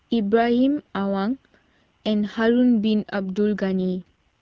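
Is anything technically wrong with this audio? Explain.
Yes. From 3.79 to 4.28 s there is an AMR rate drop. The network has told the AMR wideband (HD Voice) codec to switch to a lower rate, spending fewer bits on the speech itself and more on error protection. The texture fits a step down from the 12.65 kbit/s mode, where speech stays clear with only light coding damage, to the 6.6 kbit/s mode. The bandwidth doesn't narrow and nothing drops out, but for that half second the speech turns rough, raspy and synthetic.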